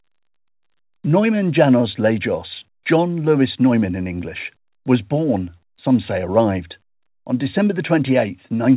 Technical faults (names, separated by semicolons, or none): none